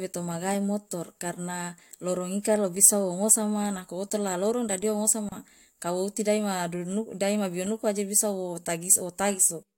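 Two separately encoded pieces of this speech recording were spliced together without trimming, so the encoder's start-up delay and the padding on the final frame of the earlier piece both remain at the seam. The result is a gap at a join of encoded pieces: a silence of about 31 ms opens in the speech from 5.29 to 5.32 s, its edges smeared by the codec, before the sound resumes exactly where it broke off.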